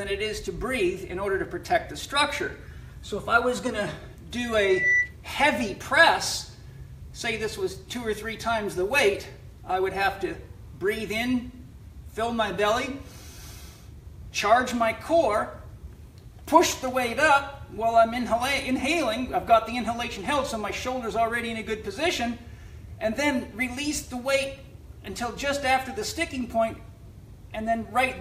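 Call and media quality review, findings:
Loudspeaker feedback squeal, 4.57 to 5.16 s. Single 2 kHz tone swells over roughly 0.3 s, peaking about 5 dB above programme level. Probable component: open mic near its own loudspeaker; loop gain above unity at 2 kHz.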